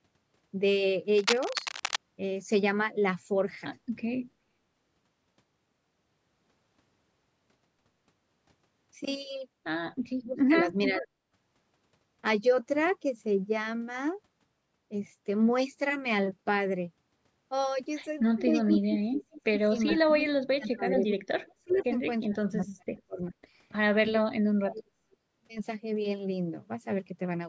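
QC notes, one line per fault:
1.16–1.98 s, cable scratch noise: a worn cable, connector or control was likely moved, so its contact resistance jumped around rapidly and fed dense, irregular bursts of noise into the signal. For about 0.8 s this sounds like scratching and rustling laid over the speech, and it is loud, only around 5 dB below the speech level.
10.17–11.11 s, 18.46–23.35 s and 24.15–25.19 s, speech suppressed in double talk: both sides were likely talking at once, and the echo canceller could not tell this talker from loudspeaker echo, so it turned everything down. The voice dips and breaks up in pieces, by roughly 35 dB at its deepest in the first two spans and about 40 dB in the third. About half a second is affected in the first span, roughly 4 s in the second and about 1 s in the third.
10.84–11.05 s, 18.74–19.22 s, 20.71 s and 21.72–21.84 s, echo leak: one side was likely on a loudspeaker, and its echo canceller let part of what its microphone picked up slip back. 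A delayed copy of the voice comes through about 0.43 s late each time, in scraps. The first leak is strong, only about 5 dB under the speech, and the second is about 10 dB under. The later two are faint, around 25 and 30 dB down.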